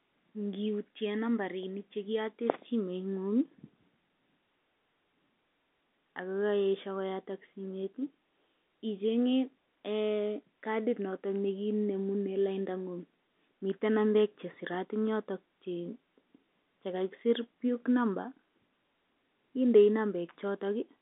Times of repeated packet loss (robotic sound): none

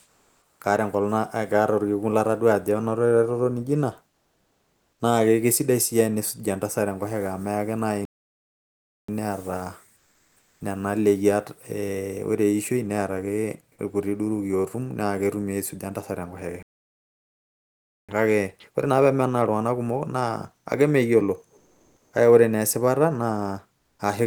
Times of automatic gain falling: none

